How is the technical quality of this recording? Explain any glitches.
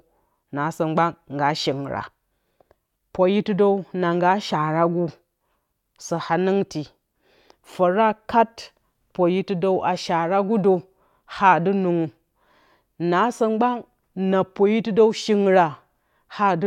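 Nothing in the recording stood out as a technical problem on listening.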